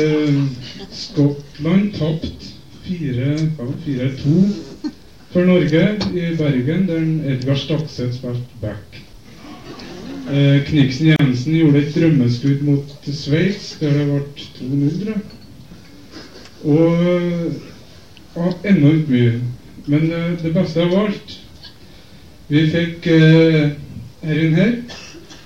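At 11.16 s, a gap at a join of encoded pieces: 32 ms of untrimmed encoder padding silence; nothing is lost, unlike a dropout.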